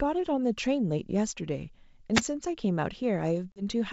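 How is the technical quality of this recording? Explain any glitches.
The speech carries two distinct glitches, heard over wideband telephone-style audio that comes through G.722 coding with little or no audible coding damage.

The first is a wireless microphone noise hit, from 2.14 to 2.22 s. It is a brief swish of static lasting under a tenth of a second. An analogue FM radio link loses signal strength when reflected paths cancel the direct one. The receiver's noise then rises.

The second is packet loss on an ADPCM call, from 3.52 to 3.63 s. About 40 ms of audio drops out as a hard-edged gap of silence, which fits a couple of lost packets. ADPCM decoders track the signal with an adaptive predictor and step size. After the gap, the decoder's state no longer matches the sender's. So the speech resumes with slight distortion, then settles quickly.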